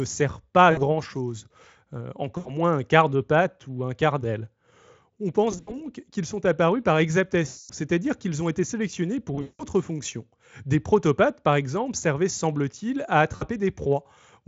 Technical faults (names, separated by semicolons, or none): VoIP packet loss concealed by the speech codec